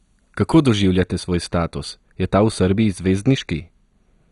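From the first moment the speech has a dull, gurgling, granular texture, with a hard ceiling at 11.2 kHz. That points most likely to MP2 compression at a starved rate, around 56 kbps. Short of bits, the MPEG Layer II encoder switches whole upper sub-bands off and quantises the rest coarsely. On a spectrogram this shows as a flat top edge at 11.2 kHz, with blocky upper bands flickering on and off beneath it.

From 1.00 s to the end, de-emphasis applied wrongly adds a smooth treble cut, about 10 dB down at 10 kHz relative to 1 kHz. A filter meant to undo pre-emphasis has acted on audio that never had any, or has acted twice, so the top end slopes away and the speech turns muffled and dull. On a spectrogram the energy fades steadily toward the top from 1.00 s onward. The waveform looks smoother, with less fine high-frequency detail.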